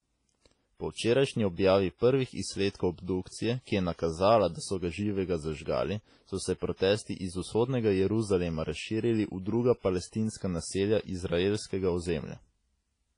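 The speech is dull and washy from start to finish. Nothing is present above about 10.3 kHz. Quiet stretches carry a hiss that swells and fades with the voice, and the tone rings. This points to heavy WMA compression as the likely cause. A transform codec at a low bitrate, fitting something near 24 kbps, drops weak detail and spreads its coarse quantisation noise across long blocks.

Pre-echo follows from the same block coding. At 2.70 to 2.75 s, just after "včerajšnji objavi prvih", a short hiss leads the next attack by 48 ms. At 3.62 to 3.67 s, just before "je nakazala da so", it spans 57 ms. At 6.76 to 6.80 s, between "so se" and "iz vzhodnega", it lasts 38 ms. At 10.37 to 10.41 s it lasts another 38 ms. Each time a sharp onset fell late in a block. Noise sized for the loud part filled the quiet moment before it, so the attack sounds softened and smeared.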